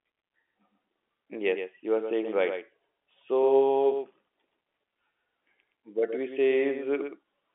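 From start to finish the speech carries a doubled audio track: a second copy of the same sound trails the original by about a tenth of a second, roughly 10 dB quieter. This is likely a second capture through a slower path being mixed back in. Unlike room echo or reverb, the copy is a single clean repeat with no decay and no added room colour. It keeps the same narrow telephone band as the original, with nothing audible above about 3.8 kHz.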